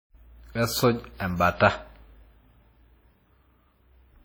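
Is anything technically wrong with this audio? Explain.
Yes. Throughout the speech, the artefacts of heavy compression remain, consistent with an earlier pass at around 32 kbit/s that was likely then saved again as a high-bitrate MP3. This is low-bitrate audio saved at a high bitrate. Unlike a plain low-bitrate file, the re-encode's large size promises quality it cannot restore; there is nothing above 20 kHz, and the re-encode adds nothing audible.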